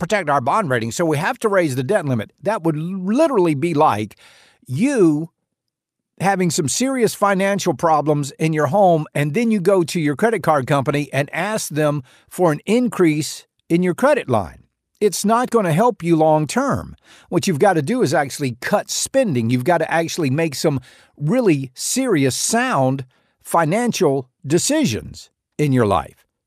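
No technical faults can be heard anywhere in the speech recording, and the signal stays intact throughout.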